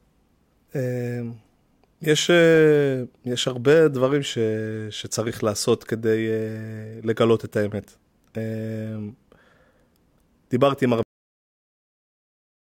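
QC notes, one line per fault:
11.03–12.77 s, cut-off end: the speech halts mid-sound and drops straight to digital silence with no decay, because the final buffers were never written or played.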